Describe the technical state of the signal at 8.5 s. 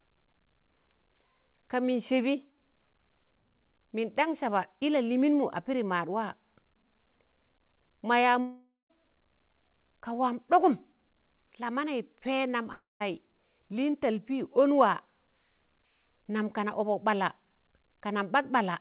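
From 8.40 to 8.91 s, just after "ma yaa", the sound stops arriving. A fading buzz fills the gap, then silence. A long network dropout is the likely cause.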